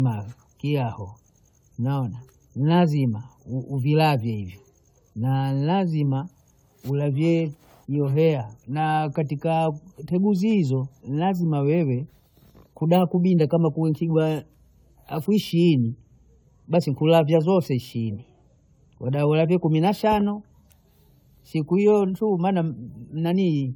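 The speech has a swirly, watery smear running through the whole clip, with a hollow, phasey tone and consonant attacks that blur instead of snapping. That is generation loss, likely from the audio being decoded and re-encoded with AAC-LC around ten times. Each pass re-quantises on a shifted frame grid, so the artefacts compound well beyond what a rate near 96 kbit/s would explain. The band still extends to 20 kHz, so the damage is texture, not bandwidth.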